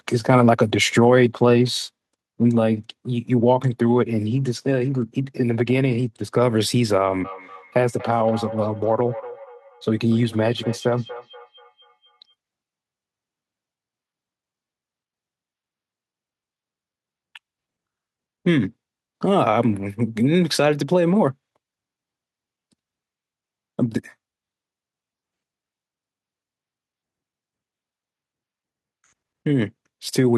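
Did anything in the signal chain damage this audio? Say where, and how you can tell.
Yes. From 7.24 to 12.34 s each word returns about a fifth of a second later, thinner and ringing, peaking about 17 dB below the speech. This is feedback echo between two devices in call processing: one device replays another's microphone, which recaptures it, and neither echo canceller removes the other's playback.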